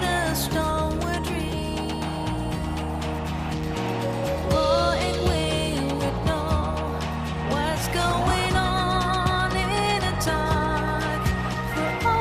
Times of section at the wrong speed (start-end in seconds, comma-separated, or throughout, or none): none